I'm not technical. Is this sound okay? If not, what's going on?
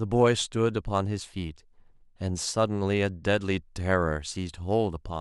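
Yes, this sound is okay, and there's nothing going on with it that needs fixing.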